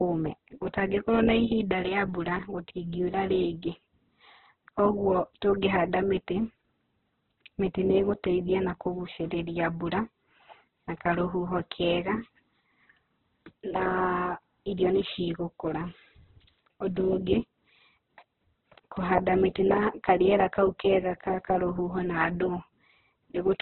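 A speech clip with heavy codec damage throughout. Nothing sounds above about 4.2 kHz, so it is narrowband and dull. Tones turn grainy, rough and noisy. The likely cause is Opus compression in its music mode, at a very low bitrate around 8 kbps.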